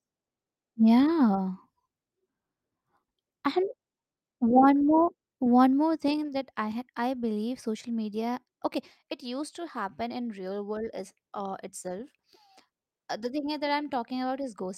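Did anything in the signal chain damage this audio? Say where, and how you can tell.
No, there is no audible sign of damage from any stage of the signal chain anywhere in this recording.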